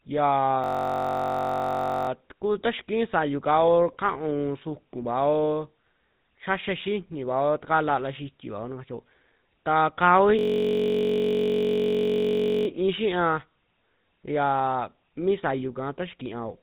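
Speech with a buzzy, gravelly roughness throughout and nothing above 3.8 kHz, so it sounds dull and boxed-in. That is the GSM full-rate codec: its coarse pulse-driven excitation model blurs the voice's fine detail, which fits a 13 kbps GSM full-rate stream. From 0.64 to 2.09 s and again from 10.39 to 12.67 s, the speech collapses into a steady buzz at about 46.9 Hz. This is a system hang loop, a single 21.33 ms stretch replaying over and over, which fits a 1024-sample buffer. Once each loop ends, the speech resumes with essentially nothing missing.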